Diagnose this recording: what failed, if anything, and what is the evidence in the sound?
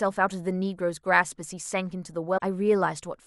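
Damaged data in a compressed stream, from 2.34 to 2.42 s, is a storage or transmission fault at the codec stage. The speech breaks for about 80 ms. That break is the decoder meeting corrupted bytes: it misreads or drops the frames it cannot parse, loses frame sync, and scans forward for the next valid header before normal decoding of the speech resumes.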